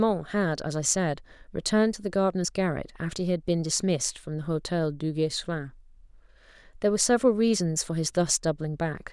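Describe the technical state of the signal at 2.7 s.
At 2.7 s the speech signal is intact, with no audible fault at that point.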